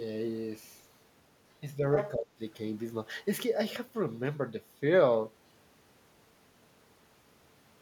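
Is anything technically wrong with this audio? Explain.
Yes, two faults occur close together in this speech. From 1.96 to 2.11 s, the other side's voice leaks through nearly as loudly as the talker, likely uncancelled loudspeaker echo, drawing a second overlapping harmonic stack on the spectrogram. From 2.16 to 2.4 s, speech is suppressed in double talk, likely the canceller turning everything down. The talker's level falls by around 30 dB at worst, and the waveform visibly collapses for about a fifth of a second.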